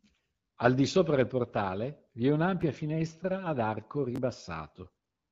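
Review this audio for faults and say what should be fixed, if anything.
Chunks out of order occur at 2.61 s, between "del portale vi è" and "finestra ad arco", and again at 4.16 to 4.18 s, just after "finestra ad arco". In each case a segment of about 6 ms is written two or three chunk slots late, producing three hard joins that are heard as a brief jumbled moment. Prevention: sequence-number each buffer and reorder before playback rather than writing chunks as they arrive.

AMR bit errors occur at 4.84 to 4.89 s. Across roughly four 20 ms frames, around 5 percent of the less protected bits were flipped while the checksum on the critical bits still passed. The pulse positions and fine gain and spectral parameters decode wrongly, so the sound keeps its level but turns momentarily gargly and scratchy, in contrast to the clear, lightly coloured AMR-WB coding at 12.65 kbit/s around it. Prevention: improve link quality or drop to a more robust AMR mode with stronger channel protection when error rates rise.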